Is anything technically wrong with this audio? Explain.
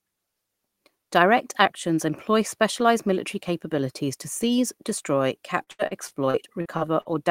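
Yes. Repeated packet loss (robotic sound), 5.63 to 7.08 s, after "capabilities to seize destroy": eight gaps up to 78 ms are patched by extending prior sound, leaving choppy speech with pieces missing.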